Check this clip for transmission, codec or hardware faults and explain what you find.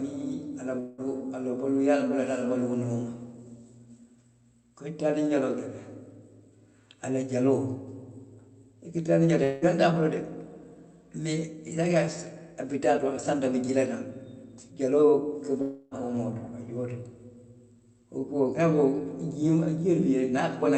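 Three gaps are audible in the speech, each most likely a long network dropout. They fall at 0.79 to 1.01 s, 9.44 to 9.65 s and 15.62 to 15.94 s. About 180, 180 and 300 ms of audio never arrive. The receiver fills each gap by stretching the last sound into a fading buzz, with no true silence, and the speech resumes past the lost part. The high end stops near 8 kHz, as expected from the call codec.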